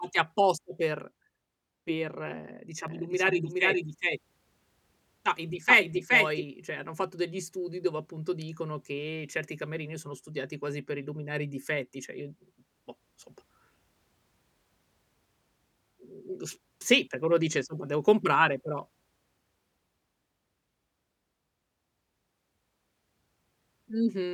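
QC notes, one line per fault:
2.88–6.44 s, doubled audio track: the speech is heard twice, with a second full-band copy trailing the original by around 400 ms at roughly equal loudness. The copy is dry, with no decay or added room sound, so it reads as a separate overlapping track rather than an echo. It cuts in and out abruptly at both ends of the span. This is likely a second capture of the same source through a slower path being mixed in.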